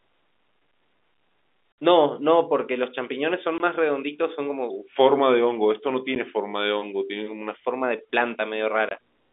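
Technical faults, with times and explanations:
1.72–1.78 s, 3.58–3.60 s, 6.15 s and 8.89–8.91 s, packet loss filled with silence: packets went missing and the receiver put silence in their place. The gaps are 60, 20, 10 and 20 ms, which fits 10 ms packets. The speech drops out abruptly, with hard edges.
4.70–7.54 s, section at the wrong speed: this stretch plays at 0.893 times its recorded rate, likely from being fitted to a mismatched clock. Speed and pitch fall together, so the speech turns slower and about two semitones deeper, then returns to normal.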